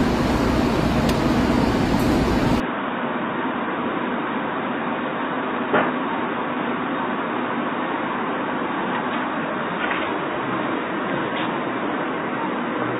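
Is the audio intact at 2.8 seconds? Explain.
No. From 2.6 s to the end, the sound turns boxy, loses everything above 3.8 kHz, drops about 5 dB and gains a faint new background noise, with no gap at the change. This is likely an input switched to a poorer device. The new noise floor and level step set it apart from a plain low-pass filter.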